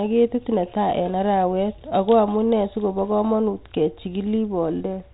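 No technical faults are audible anywhere in the speech.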